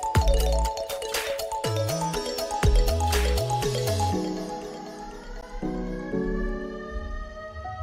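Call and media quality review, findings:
Gap between stream segments at 5.41 s: hard-edged silent hole of about 14 ms. Packager/player timestamps. Adjacent segments, 2-second cadence suggested, leave a timing gap the player pads with silence; sound pauses then resumes intact, nothing dropped.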